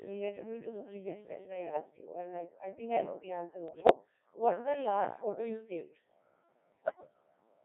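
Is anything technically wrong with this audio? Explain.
Yes. The speech runs through the Codec 2 vocoder throughout, confined to roughly 250 Hz to 3.6 kHz, and the heavy robotic buzz suggests a very low rate near 1.3 kbit/s. Pitch, voicing and envelope are rebuilt from sine waves, not the original waveform, so it sounds synthetic and buzzy, unlike the swirly smearing of a waveform codec.

Bit errors on digital voice radio strike at 1.61 to 1.81 s, 3.68 to 3.95 s, and 6.72 to 7.14 s, growing more severe each time. Corrupted frame parameters make pitch, level and tone jump into bleeps and warbly gibberish. Packet loss would leave gaps or repeats instead.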